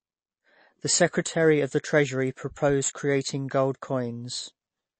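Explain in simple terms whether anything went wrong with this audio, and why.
Two things went wrong, and both last the whole way through the speech.

First, there is a gritty hiss riding on the speech that gets rougher on louder and brighter sounds, like s sounds, and disappears in the pauses. That is sample clock jitter. The converter's timing clock wobbled by a few microseconds, so each sample was captured slightly early or late. Where the sound changes quickly, that timing slip becomes a noticeably wrong value, which is heard as the roughness.

Second, the speech sounds dull and plainly watery, with a swirly, metallic edge on s sounds and softened starts to syllables. Nothing is heard above about 8.3 kHz, so the crisp top end is missing. This is most likely MP3 compression at a low quality setting. The encoder cut off the treble and dropped quieter details that flicker in and out from moment to moment, which makes the sound wobble.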